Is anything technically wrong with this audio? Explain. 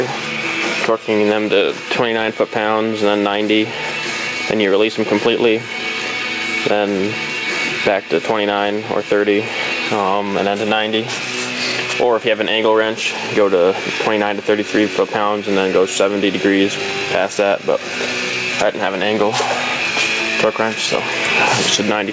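Yes. Gain pumping runs through the whole clip. The likely cause is input gain set far too high for the microphone, with a fast limiter or compressor clamping down on each loud sound and letting go in the gaps. The level swings by around 15 dB, so loud and quiet parts sit unnaturally close together and the sound comes across squashed. Separately, nothing reaches above 8 kHz, which fits a G.722 call codec.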